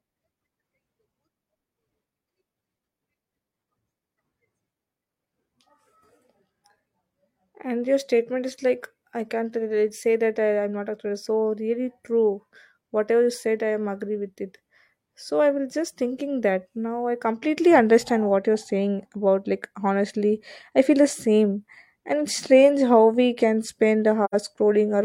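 At 24.24 s to 24.34 s the speech drops into a brief, soft-edged silence, an AAC frame loss with muting. About 85 ms of audio, which fits two lost frames, was zeroed, and overlapping windows fade it out and back in, unlike a hard dropout.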